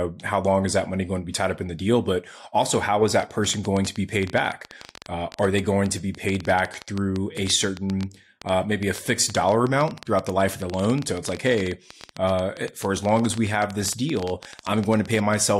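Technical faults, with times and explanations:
3.20 to 15.35 s, train of clicks: Just after "also how is", a run of sharp ticks starts and continues almost to the end. They arrive at about 10.9 per second, but the spacing is uneven. There are around 150 in all, and each has much the same shape. The loudest rise about 10 dB above the speech, so they cut through words and pauses alike. Likely cause: interference from nearby equipment or a faulty connection or power supply injecting pulses.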